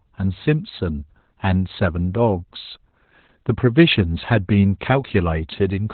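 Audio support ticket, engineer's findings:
Speech muffled, hoarse, slightly robotic across the whole clip; nothing above 4.2 kHz. Opus voice compression, SILK linear-prediction mode at narrowband, heavy codec damage. Coarse excitation coding and band cut to 4 kHz, consistent with a bitrate around 8 kbps.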